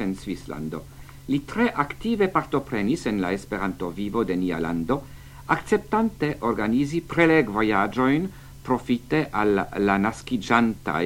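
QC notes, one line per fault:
Nothing to flag here; the whole thing sounds fine to these ears.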